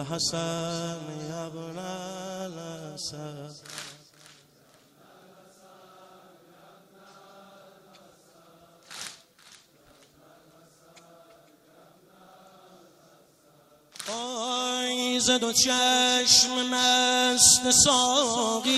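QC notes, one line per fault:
No technical faults are audible anywhere in the clip.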